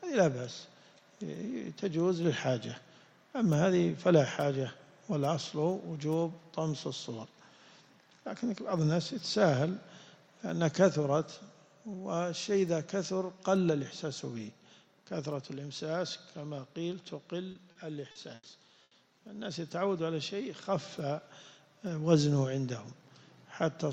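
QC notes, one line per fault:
17.51–18.46 s, repeated packet loss (robotic sound): four gaps, longest 80 ms, each patched by extending the previous sound, giving choppy, robotic audio with 200 ms missing.
18.83–18.94 s, burst of packet loss: an 80 ms gap was filled by continuing and fading the last sound, then audio resumes with that stretch gone.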